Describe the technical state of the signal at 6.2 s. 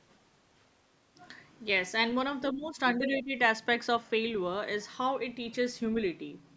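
At 6.2 s the signal is intact, with no fault; it has passed through ordinary call microphone processing, which trims the lowest bass and leaves nothing above 8 kHz.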